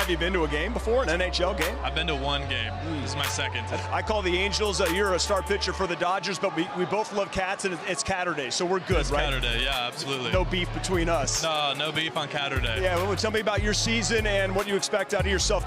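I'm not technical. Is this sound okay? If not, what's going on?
No. At about 11.56 seconds, two tiny slices of the audio, each about 20 milliseconds long, ended up swapped. One slice was held up and played one slot late, after the slice that should have come after it. This is called chunks out of order. Nothing is missing, but the brief stretch up to about 11.6 seconds comes out scrambled, with abrupt joins where the pieces meet the wrong neighbours.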